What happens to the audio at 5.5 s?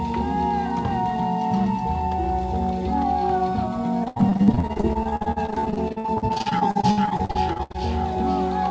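At 5.5 s the music sits inside a stretch of repeated packet loss (robotic sound) running from 4.04 to 7.76 s. Over those 3.7 s, 53 short holes open one after another, the longest about 78 ms, and each is patched by stretching the preceding sound, so about 38% of the span is concealment. Unlike a single dropout, the holes recur every few tens of milliseconds, giving a choppy texture with pieces missing over the G.722 call path's 8 kHz-limited band.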